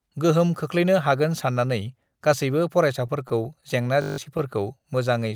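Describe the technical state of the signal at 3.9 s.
At 3.9 s you're inside a run of scattered short gaps stretching from about 3.07 to 4.41 s. Roughly seven packets went missing or arrived late there, and the receiver papered over each hole by stretching the last bit of speech forward. None last much beyond 15 ms, together only around a tenth of a second. What you hear is brief ticks, little smears and hiccups through that stretch.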